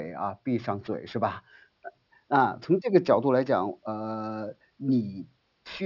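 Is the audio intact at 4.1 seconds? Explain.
No, at 4.1 seconds the speech carries aliasing, as it does across the whole clip. It sounds like the rate was dropped to 12 kHz without filtering first, so anything above 6 kHz folds back down, leaving sibilants gritty with a faint metallic haze roughly 25 dB below the voice.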